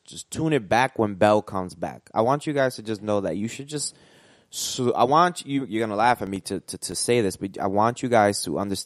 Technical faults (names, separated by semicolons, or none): filter restarted on every block